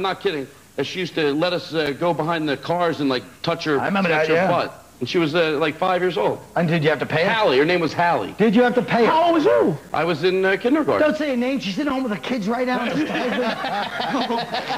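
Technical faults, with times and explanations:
1.86, 3.87, 5.88, 7.88, 9.89, 11.90 and 13.90 s, gap between chunks: the sound drops out for about 7 ms and resumes abruptly, and the same hard-edged hole recurs every 2.0 s. The audio was delivered in 2-second chunks with a brief stretch of silence between consecutive chunks, from padding at each join or from playback starting each chunk slightly late. The sound is interrupted at each seam rather than cut away, so the regular spacing is what gives the fault away.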